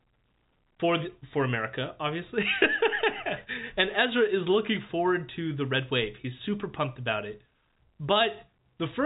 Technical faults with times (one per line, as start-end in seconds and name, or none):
none